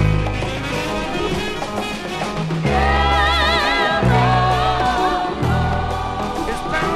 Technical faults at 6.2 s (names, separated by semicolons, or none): none